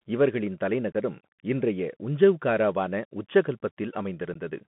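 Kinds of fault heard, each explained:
Bluetooth CVSD headset codec: Throughout the speech the sound is boxed into a narrow telephone band, roughly 150 Hz to 3.4 kHz, with a granular hiss underneath, scratchy s sounds, and roughness on loud, bright syllables. This comes from the one-bit-per-sample delta coding at 64 kbps used on headset links. Each sample only steps up or down by an adaptive amount, so fast, loud high-frequency movement outruns the step size and distorts.
Unconcealed Bluetooth headset packet loss: Two brief, hard-edged holes cut into the speech. The first runs from 0.92 to 0.95 s, about 22.5 ms, just before "இன்றைய உஞ்சௌகாராவான". The second, about 15 ms, is at 4.34 s. Each sounds like an abrupt dropout, as if two or three short voice packets went missing on the headset link and were replaced with silence instead of being patched over, leaving sharp gaps in place of the missing audio.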